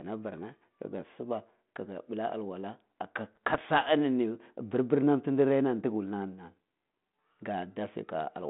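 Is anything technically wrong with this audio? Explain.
Yes. The speech passes through a G.726 ADPCM path at 32 kbit/s, with a line band of about 150 Hz to 3.6 kHz. Between 3.35 and 3.69 s there are bit errors on an ADPCM link. Around half a percent of bits are flipped. Each wrong bit throws off the decoder's step size and predictor. The damage then lingers for some milliseconds. The result is clicks and rough, gritty bursts, with brief jumps in level across that third of a second.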